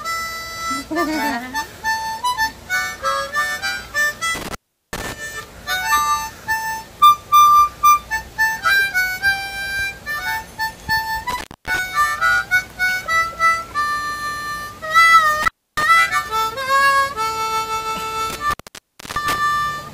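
Four brief dropouts with crackle at their edges and faint hiss in the gaps, at 4.35 to 5.13 s (open 0.38 s), 11.30 to 11.79 s (0.27 s), 15.43 to 15.83 s (0.29 s) and 18.30 to 19.38 s (0.63 s), are intermittent contact: a loose cable or plug momentarily breaking the signal path.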